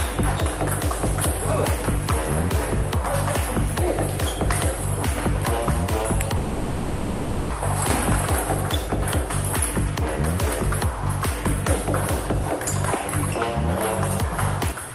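A call audio freeze runs from 6.37 to 7.52 s. The last sound continues as a fading buzz or hiss for about 1.1 s. Playback then resumes where it stopped, likely after delayed packets emptied the jitter buffer.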